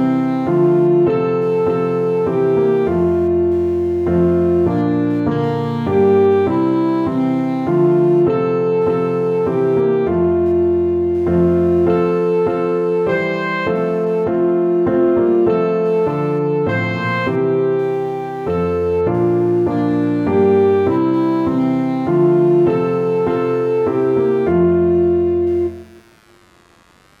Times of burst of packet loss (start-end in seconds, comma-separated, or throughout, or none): none